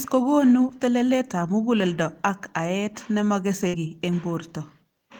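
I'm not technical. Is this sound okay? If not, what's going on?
No. Around 3.67 to 3.75 s, right after "mukuleldo ak aet nemakese", there's a burst of packet loss. A few pieces of the audio never arrived, so the player stretched and faded the last sound for about 60 ms, then skipped ahead to "ki eng", losing a brief stretch of speech.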